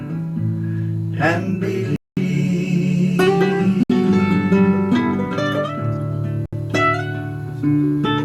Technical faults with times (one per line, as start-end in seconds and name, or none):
1.96-2.17 Bluetooth stall
3.83-3.90 Bluetooth stall
6.46-6.53 Bluetooth stall